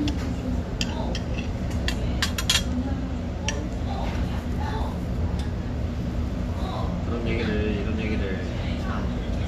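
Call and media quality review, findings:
Nothing stood out on listening to this recording of sounds; no findings to log.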